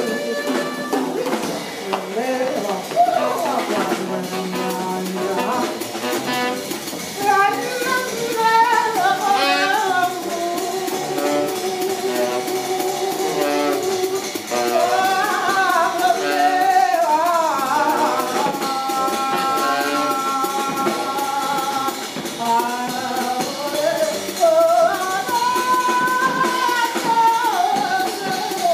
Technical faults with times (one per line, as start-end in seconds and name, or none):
none